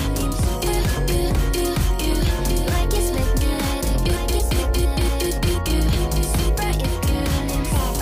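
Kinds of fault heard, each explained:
Doubled audio track: a full-band second copy trails about one and a half seconds behind, roughly 5 dB quieter, with no decay, likely from a second capture path.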